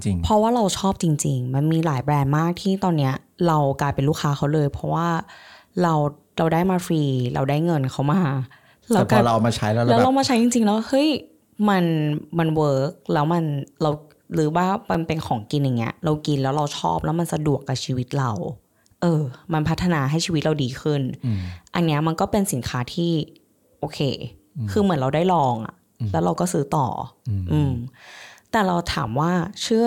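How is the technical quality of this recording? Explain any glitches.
Two brief glitches break into the speech, each a block of digital silence. At 14.94 s the audio drops out for about 2.7 ms, which fits a 128-sample buffer, and at 16.38 s a second dropout lasts about 1.8 ms. The program likely failed to fill the output buffer in time, so those samples went silent. The signal jumps to silence and back with no fade, so each gap is heard as a tick or dip.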